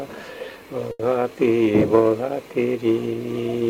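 At about 0.91 s a packet arrived late and the jitter buffer ran dry, causing a short stall from a late packet that lasts until roughly 1.01 s. The receiver filled the gap by stretching the last sound it had for about 80 ms, then resumed exactly where it left off, so nothing is lost. The playback is pushed back 80 ms, and the stretch is heard as a held sound with a slight buzz or dip.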